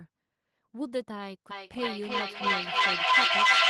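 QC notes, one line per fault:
1.51–3.70 s, feedback echo between two devices: the speech returns at a fixed interval of roughly 300 ms, thinner and ringing, and builds to about 12 dB above the direct speech. A second device in the room replays the signal into the microphone, and neither echo canceller removes it.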